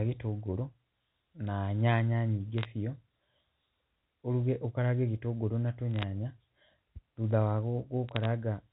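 Bit errors on a digital phone line strike this speech clip at 2.58 to 2.65 s, at 5.96 to 6.04 s just after "gĩtũngũrũ na", and at 8.09 to 8.25 s. Each burst is a short patch of sharp ticks laid over the speech. The line carries G.711 A-law telephone coding, and each flipped bit corrupts one 8-bit sample. Hits on the sign or high-order bits throw that sample far from its neighbours, at an error rate of about 0.15 to 0.3 percent.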